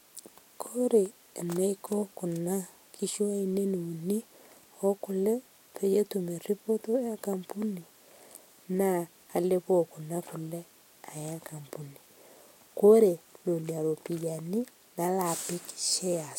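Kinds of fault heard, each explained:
Nothing here needs an entry, since no technical fault turns up anywhere in this stretch of speech.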